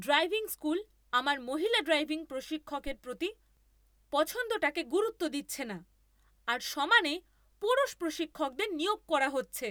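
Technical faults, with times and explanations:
2.87 to 2.95 s, phantom power thump: a deep, low thud peaking at about -31 dBFS and dying away within 17 ms. A supply switched on or off on the live input sends a voltage step through the coupling capacitors. Unlike a plosive pop, it is one electrical step-and-decay unrelated to the speech.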